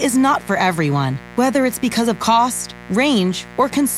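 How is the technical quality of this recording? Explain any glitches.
The recording is compromised by one fault that runs the whole way through. Mains buzz sits under the speech from start to finish at roughly 20 dB below it. Sharp switching spikes, entering twice per 60 Hz cycle, produce a dense ladder of harmonics reaching into several kHz. That gives a steady, raspy edge rather than the smooth, low tone of plain hum.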